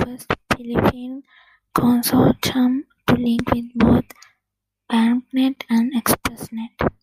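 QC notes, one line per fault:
No faults found on this speech clip; nothing to flag.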